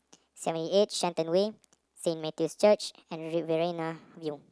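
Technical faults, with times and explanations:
Throughout, wrong sample rate: playback runs faster than capture with no conversion, so speech is 1.38 times fast and 5.55 semitones high, fitting 16 kHz audio played at 22 kHz.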